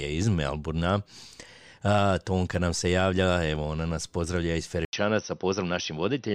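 A speech clip where, at 4.85 s, just after "ona nas pozdravlja iz", the sound drops out for 80 ms and then returns duller and narrower until the end, with nothing above 6 kHz and a faint new noise floor well beneath the speech, though loudness stays about the same. This is likely an input switched to a poorer device. A spectrogram shows a thin vertical gap, then a hard ceiling at 6 kHz, while the waveform shows only the brief break.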